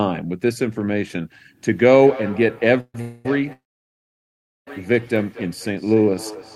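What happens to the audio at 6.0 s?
At 6.0 s two faults overlap. The first is a feedback echo between two devices, present from 1.71 s to the end of the clip. A second device in the same room plays back the call, and its sound re-enters the first microphone, which that device's echo canceller does not remove. The speech returns at a fixed interval of roughly 200 ms, thinner and more ringing on each pass, peaking about 17 dB below the direct speech.

The second is a jitter buffer slow-down from 5.72 s to 6.32 s. The receiver's buffer ran low or raised its target delay, so it rebuilt its reserve by repeating individual pitch periods and fragments of pauses. That stretch plays at 88% speed with unchanged pitch, adding 78 ms, so sounds are drawn out.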